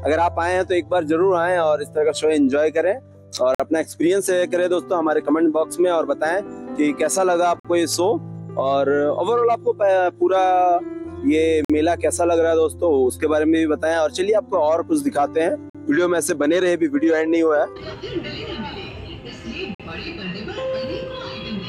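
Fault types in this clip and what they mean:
Gap between chunks: the audio arrives in 4 s blocks with 50 ms of silence inserted at each join, heard as five short holes at regular intervals.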